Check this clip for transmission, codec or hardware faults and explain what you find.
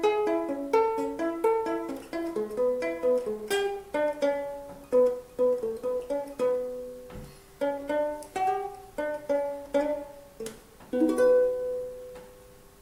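No transmission, codec or hardware faults.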